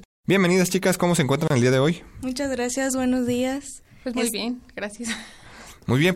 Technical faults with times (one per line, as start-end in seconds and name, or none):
1.48-1.50 gap at a join of encoded pieces